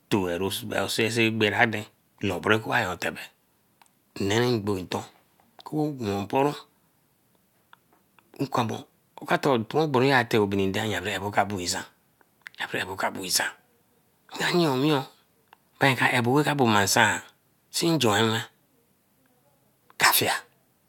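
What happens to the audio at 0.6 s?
At 0.60 s there is a single sharp click, likely from dropped samples: a fraction of a millisecond of the waveform is missing, so it jumps abruptly.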